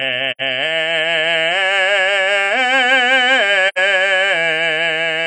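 A music clip with two brief dropouts from AAC frame loss with muting. The first runs from 0.31 to 0.41 s. The second runs from 3.68 to 3.78 s. Each gap lasts about 85 ms, which fits two lost frames. The decoder zeroes the missing spectrum. The overlapping transform windows then fade the music out and back in. Each hole has soft edges.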